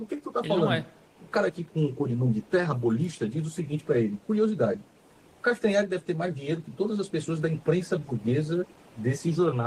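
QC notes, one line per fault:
Throughout: clock drift between sender and receiver. The sending clock runs roughly 2 percent slow against the receiving one. The jitter buffer keeps draining, so the receiver must pad the stream. Tiny timing hiccups recur at uneven intervals across the whole clip.
0.16 to 9.47 s: repeated timing corrections. Short pieces are repeated to keep the buffer from running dry, so playback runs at 98 percent speed. Around a fifth of a second is added overall. The edits are small and unevenly spaced.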